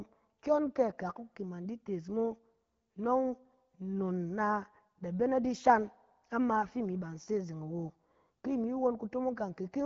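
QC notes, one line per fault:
No faults are heard in this speech clip. The band stops at about 7.3 kHz, with the light coding texture of the AMR wideband (HD Voice) codec at a rate that fits 12.65 kbit/s.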